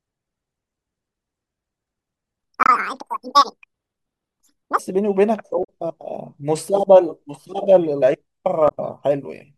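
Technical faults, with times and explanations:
2.39–4.79 s: section at the wrong speed. The speech plays twice as fast and jumps up by roughly 10 semitones, with speed and pitch shifting together. That points to playback against the wrong clock, likely a rate mismatch, rather than a pitch effect, which would leave the timing intact.
2.63–2.69 s, 5.63–5.68 s, 8.68–8.72 s: damaged data in a compressed stream. Each is a brief glitch of a few tens of milliseconds, where the decoder misreads corrupted frames and resynchronises. Unlike the speed fault, these are short glitches with no lasting change in pitch or tempo.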